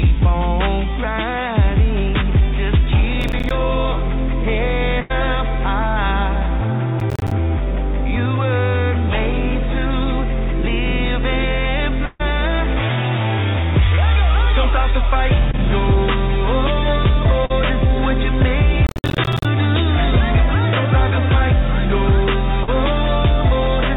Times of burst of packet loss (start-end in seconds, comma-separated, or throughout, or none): 5.00-5.12, 12.06-12.21